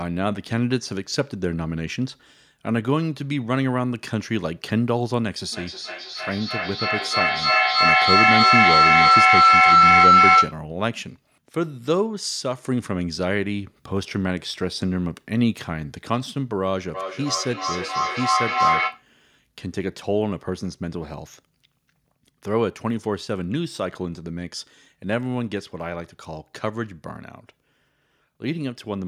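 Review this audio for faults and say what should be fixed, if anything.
Feedback howl at 5.52–10.66 s (near 1.5 kHz, about 9 dB over the speech) and 16.94–19.09 s (near 1 kHz, about 4 dB over). Each loop trip adds gain, so it swells and pulses roughly every 300 ms, unlike echo, which fades. Mute one co-located device.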